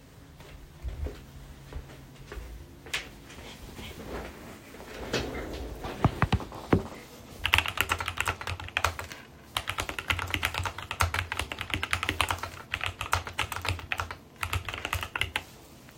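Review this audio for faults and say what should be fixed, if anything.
Nothing in this audio needs to be fixed, because no faults can be heard.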